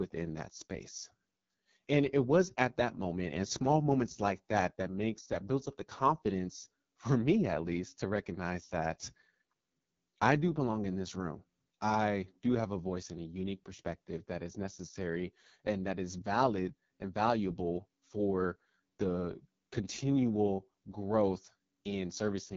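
Right through the speech, the AMR wideband (HD Voice) codec sounds rough and raspy, which fits its lowest 6.6 kbit/s mode, with nothing above 7.4 kHz.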